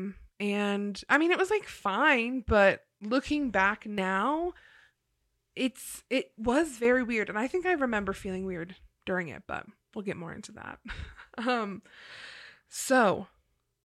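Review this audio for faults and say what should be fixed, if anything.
The speech level falls abruptly by about 6 dB from 3.82 to 3.98 s, just after "fine but looking back", and again from 6.79 to 6.85 s, after "it's it was". This is likely one channel dropping out: the mono sum loses half its shared signal while one stereo side goes silent. To prevent it, secure the cable and connector feeding that channel and watch the stereo signal for momentary dropouts.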